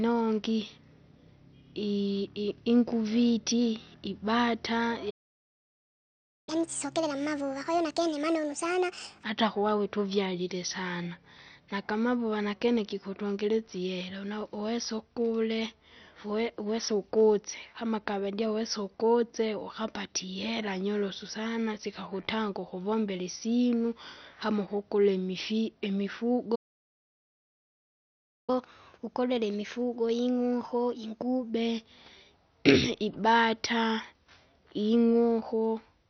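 Speech throughout sounds dull and gurgly, with a granular, watery edge on everything. That's likely heavy MP2 compression, with the upper sub-bands starved of bits and switched off, which fits a low rate around 48 kbps. There are two playback stalls. Right after "inguviti ibata" the sound cuts out from 5.10 to 6.49 s, about 1.37 s, likely the player running dry or getting blocked. A second gap runs from 26.55 to 28.50 s, about 1.93 s. After each one you get catch-up at higher speed, where the player resamples its backlog to win back time. From 6.49 to 9.24 s it runs at 1.5x, lifting pitch roughly seven semitones, and settles just before "kuwawe tuvyalile sana nagamavuva". From 28.50 to 31.50 s it's a milder 1.1x, about a semitone and a half up.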